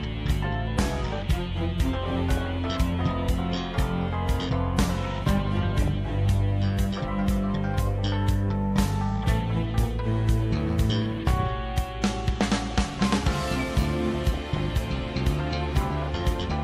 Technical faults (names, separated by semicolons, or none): DAB burbling